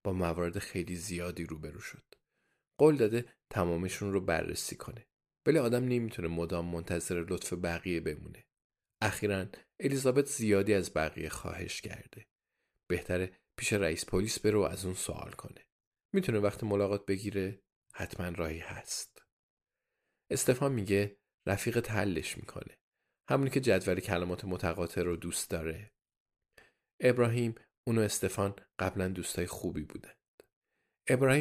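No technical faults can be heard anywhere here.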